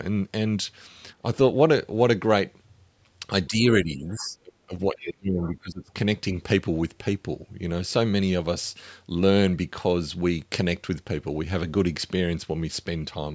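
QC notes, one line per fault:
3.48 to 5.91 s, speech suppressed in double talk: the speech dips briefly at 3.48 to 3.54 s by about 10 dB, then drops by up to about 25 dB across 3.83 to 4.74 s and 4.92 to 5.91 s. The likely cause is an echo canceller that cannot separate the talker from the far end while both speak, so it turns everything down.
4.02 to 5.54 s, other side's voice leaking through: faint scraps of a second voice surface at 4.02 to 4.25 s, 5.02 to 5.12 s and 5.42 to 5.54 s, roughly 20 to 25 dB below the speech. This is likely loudspeaker playback of the other side that the echo canceller left partly in the microphone signal.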